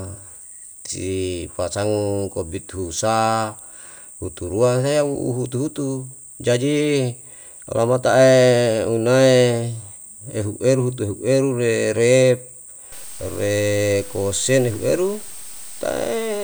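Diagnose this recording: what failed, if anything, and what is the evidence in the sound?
From 12.92 s to the end the speech goes grainy, quiet tails sputtering; likely low bit depth without dither, sounding like 6-bit truncation at sample-format conversion.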